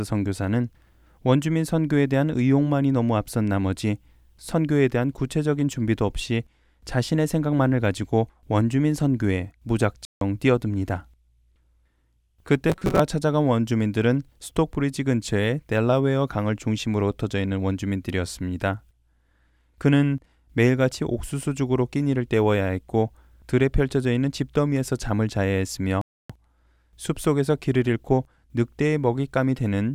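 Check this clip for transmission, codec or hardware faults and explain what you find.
Two kinds of fault are present in this speech: two Bluetooth stalls and one burst of robotic sound from repeated short buffers.

Bluetooth stall, 10.05 to 10.21 s and 26.01 to 26.30 s: interference likely delayed the wireless packets, so the headphones' buffer ran empty and playback halted until they arrived. The speech cuts to silence for 161 ms the first time and 281 ms the second, then resumes.

Robotic sound from repeated short buffers, 12.70 to 13.00 s: fresh audio likely arrived too seldom, so the player looped its most recent fragment, which fits a chunk of roughly 5.3 ms, and skipped around two-fifths of the real signal. The looping forces a rigid, metallic 188 Hz buzz that only loosely follows the speech.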